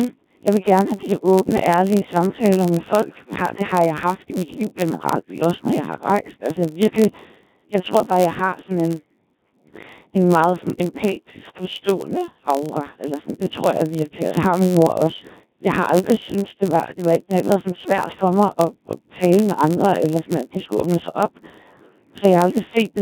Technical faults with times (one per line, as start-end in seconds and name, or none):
0.00-23.02 Codec 2 vocoder
0.00-23.02 block size mismatch (padded)